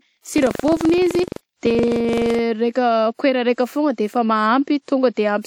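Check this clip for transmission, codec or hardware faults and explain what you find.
One hardware fault is present: buffer tearing, from 0 to 2.4 s. Writer and reader pointers crossed, splicing a small slice of older audio into each period. This produces a robotic speech rattle at 23.4 Hz, consistent with a 2048-sample buffer.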